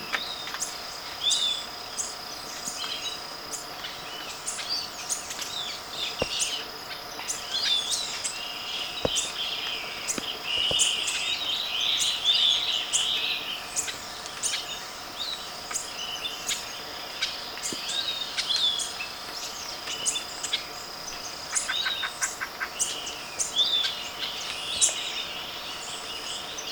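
No technical faults can be heard anywhere in this audio. Nothing in the sound calls for a timestamp or any further comment.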